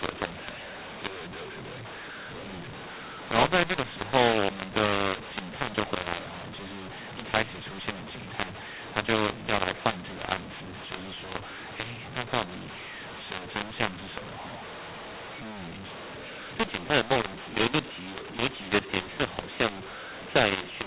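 From start to finish, the speech carries a mu-law and A-law mix-up. The telephone coding itself is G.711 at 8,000 samples a second, so nothing above 4 kHz comes through. The samples were written with A-law but read back as mu-law. The two laws map the 8-bit codes to levels differently. So levels get scrambled. Some come out too loud, others too quiet. The quietest samples jump well above silence. The speech sounds distorted, and the pauses fill with noise.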